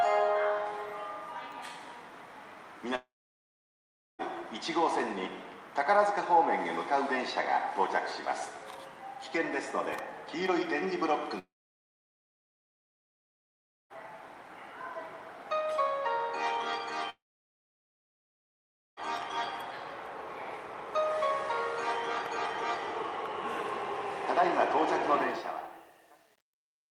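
At 2.95 s the sound cuts out until 4.22 s, then again from 11.39 to 13.93 s and from 17.10 to 19.00 s. Each gap starts with a very short smeared buzz before going dead quiet for roughly 1.1, 2.4 and 1.8 s. The audio then picks up further along with that stretch gone. That's likely a long network dropout, where the receiver briefly stretched the last sound and then had nothing left to play.

The closing fade runs from 25.18 s to the end and shows truncation distortion on a fade. From about 25.32 s the tail turns gritty, because the quiet waveform is being forced onto a few coarse steps with no dither. That fits a fade computed at around 9 bits.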